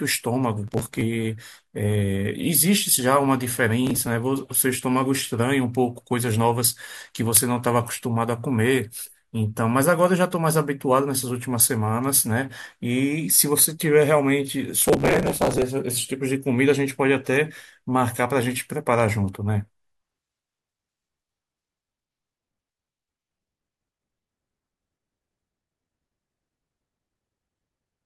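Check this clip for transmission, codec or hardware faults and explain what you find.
Processor overload crackle appears three times in this speech: 0.68–1.02 s, 3.87–4.07 s, and longest at 14.82–15.62 s. The processor missed a run of very short buffer deadlines, around 1.5 ms each, and each miss skipped a sliver of audio, leaving a hard-edged gap. The dense gaps produce a gritty tearing crackle over the speech.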